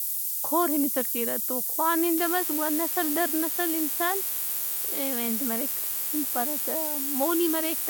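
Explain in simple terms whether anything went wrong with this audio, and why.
Two problems can be heard. The first runs through the whole speech clip. It is low bit depth with noise shaping. The sound is stored with very few steps, which fits about 4 bits. The rounding errors are pushed toward high pitches, so a thin hiss rises sharply at the top. It is louder than the speech.

The second starts at 2.17 s and lasts to the end. It is DECT cordless phone buzz. A nearby cordless phone sends a short radio pulse 100 times a second. The audio circuit picks this up as sound. The result is a steady, thin 100 Hz buzz with many overtones, softer than the speech.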